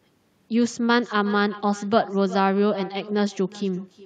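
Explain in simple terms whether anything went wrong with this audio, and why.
Throughout the speech, each phrase is followed by a fainter, hollow copy about 0.4 seconds later. That's echo with no canceller: the far-end loudspeaker feeds their microphone.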